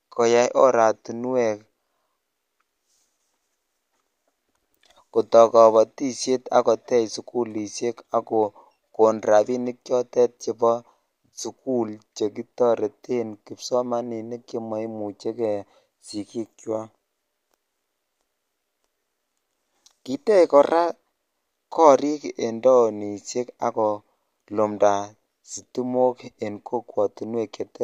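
Nothing stood out as a technical problem on listening to this speech recording.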